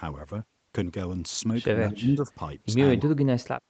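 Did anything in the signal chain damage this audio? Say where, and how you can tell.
Yes. The damage sits in the call processing stage, most likely speech suppressed in double talk by the echo canceller. From 1.87 to 2.39 s the speech sinks by roughly 15 dB for about half a second and then recovers. This is the pattern you get when the far end talks over the near end and the canceller can't separate live speech from loudspeaker echo, so it attenuates both. The 8 kHz top end comes from the call path.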